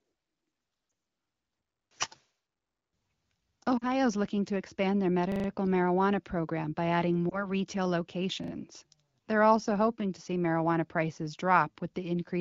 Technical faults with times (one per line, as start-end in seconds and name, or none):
0.89-0.91 lost AMR speech frames
3.77-3.84 lost AMR speech frames
5.32-5.48 repeated buffer
7.29-7.48 lost AMR speech frames
8.44-8.52 repeated buffer